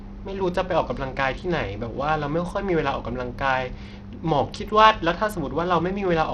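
A speech clip with Bluetooth SBC compression damage running the whole way through, and it's plainly audible: the top end thins out and flickers, with a gritty, aliased edge on the sound. That's likely a starved SBC link, which fits roughly 80 kbps.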